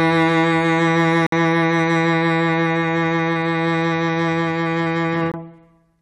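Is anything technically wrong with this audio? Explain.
Yes. Gaps between stream segments occur at 1.27–1.32 s (57 ms) and 5.32–5.34 s (21 ms). Mismatched timestamps at 4-second segment joins leave holes the player fills with hard-edged silence; no music is lost.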